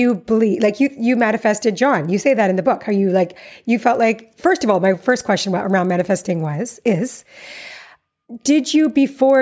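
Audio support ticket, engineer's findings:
Resampler restarted on every block, throughout. 20 Hz tick-buzz present only under speech. Each 50 ms block is converted alone, likely 24 kHz to 16 kHz, leaving errors at every block edge.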